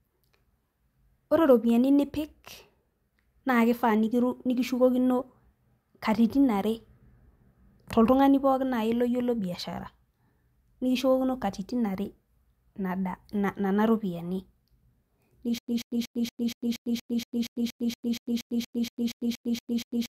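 Stutter with silent gaps runs from 15.58 s to the end of this speech clip: a 135 ms fragment plays, then about 100 ms of digital silence, repeating every 236 ms, 19 times in all. The likely cause is a stalled player or stream that replays its last buffered fragment on each retry and then runs dry. The speech that should have played over those final seconds is lost.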